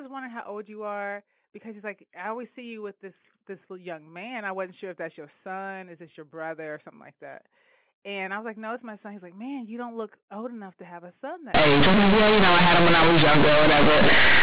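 From 11.54 s, just after "to have a son", to the end at 14.43 s, the speech collapses into loud, buzzy distortion with heavy noise in the gaps. This is companded audio read as linear: mu-law bytes played as plain 8-bit samples, so every sign change swings across half the range and quiet passages come out as loud as peaks.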